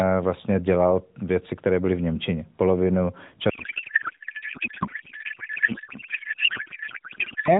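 A codec payload misread starts at 3.50 s and runs to the end at 7.59 s in this speech clip carried over AMR narrowband mobile codec. The pattern points to octet-aligned AMR frames being unpacked as bandwidth-efficient ones, so the decoder pulls parameters from the wrong bit positions. The speech turns into garbled noise and warble that barely tracks it. Before that point the audio is band-limited below 4 kHz with light coding buzz, which fits AMR-NB's 12.2 kbps mode.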